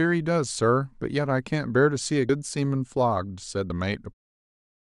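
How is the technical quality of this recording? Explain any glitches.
There are a couple of dropouts in the speech, both the same kind of glitch: compressed frames skipped, at 2.28 s and 3.69 s. The sound jumps ahead by about 70 ms and then about 40 ms, which fits whole 21.3 ms codec frames going missing. The fade-out near the end is smooth.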